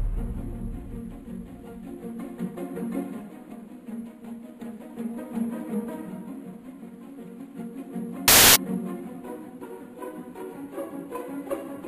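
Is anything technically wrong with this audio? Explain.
Yes. From 8.28 to 8.56 s, samples built from the wrong bytes: misassembled byte order turns each value's jittery low bits into its bulk, giving loud, harsh broadband noise that, unlike ordinary hiss, is not a quiet layer but overwhelms the sound.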